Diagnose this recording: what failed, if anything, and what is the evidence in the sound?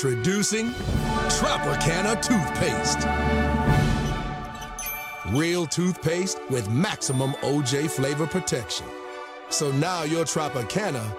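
Nothing in the signal chain failed: there are no dropouts, clicks, distortion or level anomalies to point to.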